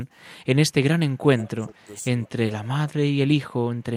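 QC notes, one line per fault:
1.18–1.23 s, speech suppressed in double talk: the speech dips by about 20 dB for about 50 ms, likely because the echo canceller ducked it while the far side was also talking. On the waveform this shows as a brief notch in the envelope.
1.39–1.48 s, echo leak: a faint copy of the speech returns 187 ms late, about 25 dB down, likely from loudspeaker pickup the canceller missed. On the spectrogram it appears as a weak, shifted repeat of the preceding harmonics.
1.47–1.87 s, speech suppressed in double talk: over about 0.3 s the level sags by up to about 15 dB, likely as the canceller ducks both sides during overlapping talk. On the spectrogram this shows as a dimmer stretch.
1.80–1.84 s, echo leak: a very faint scrap of echo at 187 ms delay sits about 40 dB below the speech, likely residual loudspeaker pickup. It is a barely visible ghost smear on the spectrogram.
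2.26–2.40 s, speech suppressed in double talk: about 0.15 s is pulled down by up to about 20 dB, likely from double-talk ducking. The waveform shows a sudden hollow in the envelope.
2.59–2.70 s, speech suppressed in double talk: the level drops by up to about 15 dB for about 0.1 s, likely from the same ducking. It appears as a short, dimmer patch across the spectrogram.
2.91–3.41 s, speech suppressed in double talk: the speech dips in pieces totalling about 0.2 s, by up to about 20 dB, likely from intermittent canceller ducking. The waveform shows a choppy envelope.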